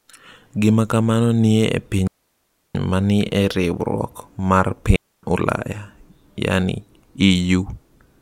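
At 2.08 s, after "kamano nitie e", the speech drops into a clean hole of near silence for about 0.67 s, returning on "ma ni e riwruok"; at 4.96 s, after "ni e riwruok mar", a second 0.27 s gap follows. These are digital wireless dropouts: the receiver lost too much data and muted with a very short fade, so unlike analogue radio dropouts there is no noise burst on either side.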